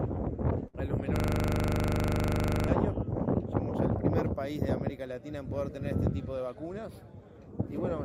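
At 0.67 s a short stall from a late packet interrupts the sound for about 80 ms, ending at 0.75 s. The packet missed its playout time and the jitter buffer ran dry, so the receiver held the last sound for about 60 ms until the data arrived, then resumed from the same point. Nothing is lost, but the held sound has a faint buzzy smear, and playback now runs 60 ms later than before.

From 1.16 s to 2.68 s there is a system hang loop. The host or driver stopped supplying new audio while the output hardware kept replaying its ring buffer, so one 40 ms piece of sound repeats exactly, about 38 times. At a loop rate of 25 Hz the result is a hard, mechanical rattle, a coarse buzz with stutter-like texture that stays frozen for about one and a half seconds before normal audio returns.

Between 6.47 s and 6.71 s a jitter buffer speed-up is audible. The buffer held more audio than its target, which happens when delayed packets arrive in a burst. 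To bring latency back down, the receiver cut out short pitch-period-sized pieces in quick succession, removing around 40 ms in total. For that quarter second the sound runs at about 111% speed with unchanged pitch, so it comes across as briefly hurried or rushed.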